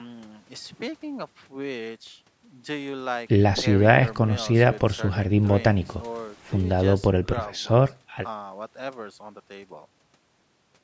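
Nothing stood out on listening to this speech, with only faint room noise about 44 dB below the talker and the expected call microphone processing, which leaves nothing above 8 kHz.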